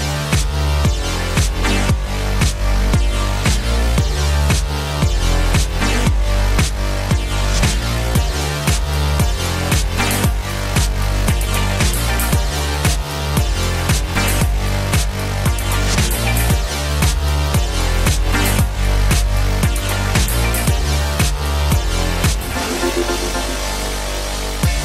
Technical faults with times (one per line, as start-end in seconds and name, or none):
0.00-24.84 MP2 compression
22.06-23.87 GSM phone buzz